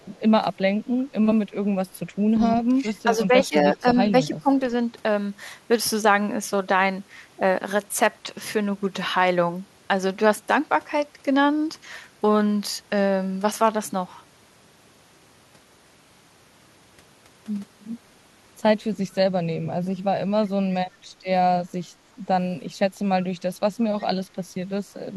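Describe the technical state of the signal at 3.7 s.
Speech suppressed in double talk runs from 3.73 to 4.50 s. The level dips, falling by about 15 dB at its deepest, with roughly a third of a second of the span pulled down in total. The likely cause is an echo canceller facing simultaneous talk from the far end. Unable to tell this talker apart from its own loudspeaker echo, it attenuated everything, pulling down the near-end speech.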